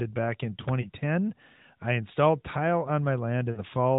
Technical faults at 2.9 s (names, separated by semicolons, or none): none